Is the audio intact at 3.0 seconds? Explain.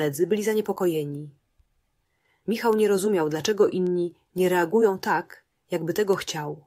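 No. Word clock ticks run from 0.46 to 6.51 s: the receiving device runs on its own clock, about 50 ppm off the sender's, so as they drift a sample is dropped or repeated roughly every 0.4 s, giving sharp ticks of uneven strength.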